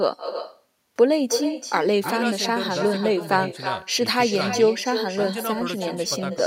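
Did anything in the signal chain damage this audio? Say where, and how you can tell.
Yes, at the call-processing stage: it's echo with no canceller. All the way through the speech, every phrase comes back around 300 ms later, about 10 dB down and thinner. That's the far end's loudspeaker feeding its microphone, with nothing subtracting it before the return trip.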